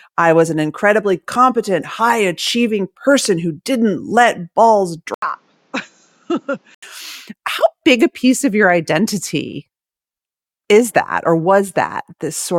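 Speech recording in which, from 5.14 s to 6.83 s, the sound abruptly turns duller and quieter, with nothing above 7.6 kHz, a drop of about 10 dB, a new background noise sitting roughly 35 dB under the speech, and a gap of about 80 ms at the switch. This is likely an input switched to a poorer device. A plain filter or codec bandwidth drop would narrow the band without adding fresh noise, a level jump and a silence at the change.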